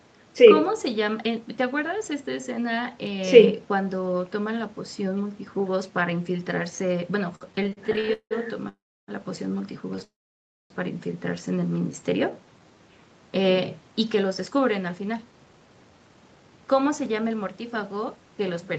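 A speech recording carried over a call link, band-limited to about 8 kHz, with several timing faults. From 7.35 to 8.33 s there are repeated stalls (stutter): thirteen brief holds, the longest 178 ms, fill about 43% of that span with stretched sound, a rapid judder rather than one clean break. Call audio freezes follow at 8.69 to 9.10 s and 10.04 to 10.72 s. Each is a single hold that decays to silence for about 310 ms and 610 ms, then resumes where it stopped, likely because packets were held up in transit. From 11.79 to 12.76 s a jitter buffer slow-down stretches the speech to about 89% speed, adding 117 ms at unchanged pitch, so it sounds drawn out rather than gapped. From 14.14 to 18.66 s a jitter buffer speed-up runs the speech at about 110% with roughly half a second trimmed out. It sounds hurried but keeps its pitch, unlike a sped-up tape.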